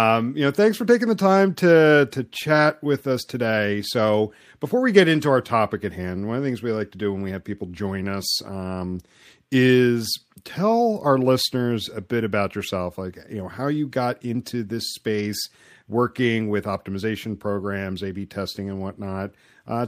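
No technical faults can be heard anywhere in it.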